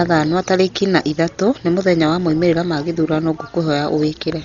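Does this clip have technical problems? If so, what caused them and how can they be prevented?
Yes. Heavy Dolby Digital compression throughout the speech leaves nothing above 6.9 kHz, with rough, fluttering noise around tones, likely from a very low bitrate near 32 kbps. To prevent it, encode at a higher bitrate or use a more efficient codec for low-rate delivery.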